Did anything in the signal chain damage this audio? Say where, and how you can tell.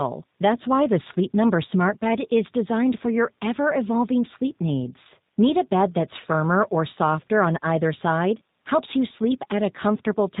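Yes: G.729 codec damage runs through the whole clip at the codec stage. The speech has nothing above 4 kHz and a plainly rough, synthetic edge, which fits 8 kbit/s coding that rebuilds each 10 ms frame from a vocal tract filter, pitch predictor and a few pulses.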